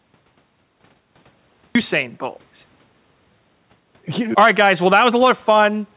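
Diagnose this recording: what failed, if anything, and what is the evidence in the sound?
The capture or storage stage started late, a cut-off start. The first 1.75 s are digital silence, then speech enters abruptly at 1.75 s in mid-sound, with no natural attack or fade-in. The speech was already running past its onset before anything was written.

Gain pumping runs throughout. The gain swings by roughly 5 dB, leaving the speech squashed. The likely cause is excessive microphone input gain driving a fast limiter in the call processing.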